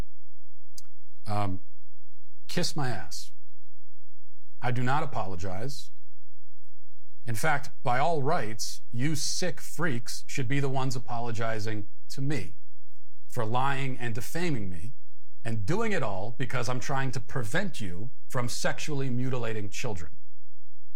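It's a speech recording with a DC offset running the whole way through: the waveform sits shifted off zero by a constant of about -19 dBFS. You won't hear it as such, but it eats headroom and parks steady energy right at the bottom of the spectrum.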